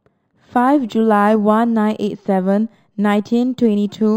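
Imaging from linear upsampling runs through the whole of the speech. The rate was raised by joining samples with straight lines, a crude filter, and the spectrum points to a move from an 11 kHz rate to 44.1 kHz. The top of the original band sounds dulled. A faint mirrored copy of it sits between 5.5 and 11 kHz, roughly 40 dB down. It gives sibilants a slight metallic shimmer.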